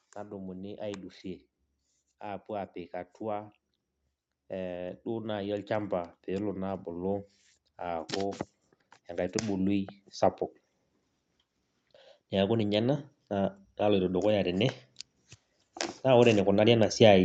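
From 4.5 to 8.45 s, 12.31 to 14.75 s, and 16.03 s to the end, automatic gain rising lifts the speech by about 7 dB, then about 4 dB, then again. Each rise takes seconds, and the background swells with the voice, unlike a sudden gain jump.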